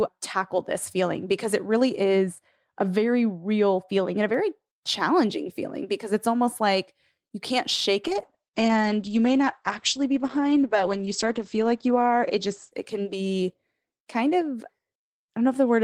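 Speech, with two faults. From 2.03 to 4.34 s, just after "feeling because it really", de-emphasis applied wrongly puts a treble cut on audio that needed none, sloping smoothly down to about 10 dB lower at 10 kHz than at 1 kHz, so the voice turns dull and muffled until "challenging feeling because it's". From 8.06 s, after "like you can't shake", a call bitrate drop sets in and lasts to 15.33 s: the encoder is starved of bits, the audio band shrinks from 20 kHz to 8 kHz, and coding turns coarse and watery, worst for about 3.2 s, which fits a fall from around 40 kbps to about 9 kbps.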